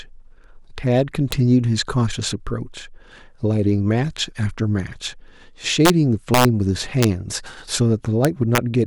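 Integer overflow runs through this speech: on the loudest peaks a gain or sum exceeded the largest integer and wrapped to the opposite sign instead of being limited, so those samples jump across the full range. Violent cracks, sharper than clipping, land at 1.32 s, 5.85 to 5.90 s, 6.34 to 6.45 s (pushed about 2 dB over, the harshest), 7.03 s, and 8.25 to 8.58 s, where the crackling persists longest.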